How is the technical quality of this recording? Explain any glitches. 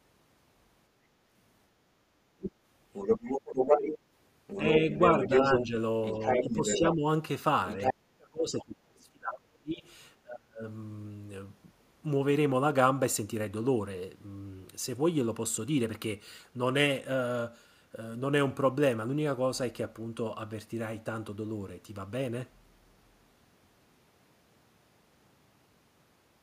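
The recording has two echo-related faults on what is otherwise a speech call, and they overlap between about 2.4 and 10.7 s.

Other side's voice leaking through, from 2.4 to 6.95 s and again from 7.67 to 7.94 s: a second voice, roughly as loud as the main talker, plays alongside the speech. The far end's loudspeaker output was likely picked up by the microphone and not fully cancelled.

Speech suppressed in double talk, from 4.62 to 5.74 s, 6.39 to 7.04 s, and 7.76 to 10.65 s: the talker's level sinks while both sides are active. The dips are slight at first, then deeper, and finally near-silent gaps over the last stretch. The echo canceller likely could not separate the talker from the echo and turned everything down.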